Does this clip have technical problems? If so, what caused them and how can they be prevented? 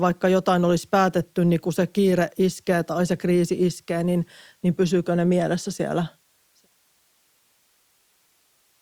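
No technical faults here.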